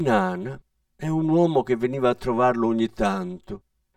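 From the start to the end of the speech, the sound is hollow and phasey. This is channel delay, heard as comb filtering. One channel runs late by around 5 ms, and the two are then summed to mono. Sound common to both channels cancels where the copies arrive out of step. The first notch sits near 100 Hz. Further notches repeat at even spacing up the spectrum. They stay fixed, so the coloration never changes.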